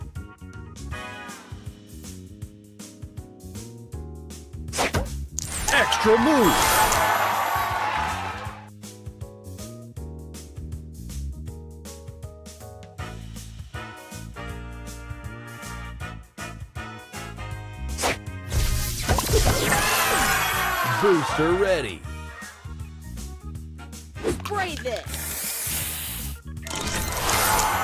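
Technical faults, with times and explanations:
No technical faults were detected anywhere in the clip.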